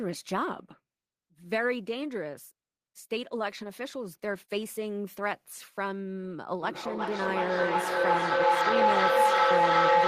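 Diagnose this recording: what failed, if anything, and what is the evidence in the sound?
Feedback howl in the call path. From 6.62 s, a tone near 1 kHz swells and pulses roughly every 0.4 s, reaching about 9 dB above speech. The microphone-to-speaker loop gains level on every trip.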